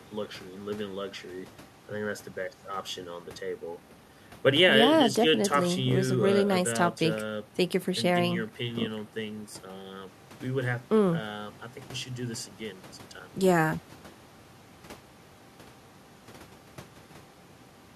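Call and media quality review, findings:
No faults found in this call and media quality review.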